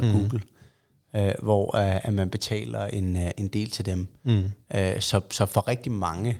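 Nothing in this bit of speech stands out as a technical problem; it just runs along without any audible faults.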